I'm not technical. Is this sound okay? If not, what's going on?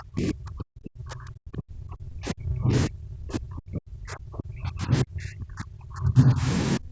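No. The speech is pushed down heavily from the start to 6.46 s, recovers briefly, and is pushed down again from 6.77 s to the end. This is most likely speech suppressed in double talk: both people talked at once, and the call's echo control couldn't tell this voice from the echo of the other side, so it muted it.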